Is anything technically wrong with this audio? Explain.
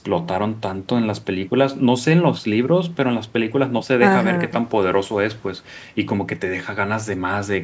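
No, nothing technically wrong.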